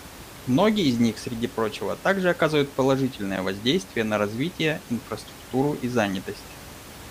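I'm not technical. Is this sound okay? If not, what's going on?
Yes, nothing stood out as a problem when listening to this speech recording.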